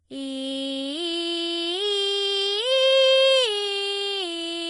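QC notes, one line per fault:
Throughout, Vorbis compression, heavy: the music has nothing above 10.6 kHz, and its upper range sounds hissy and grainy, with roughened tones and blurred attacks. This is likely a low-quality Vorbis encode near 25 kbps, quantising treble so coarsely that detail becomes noise.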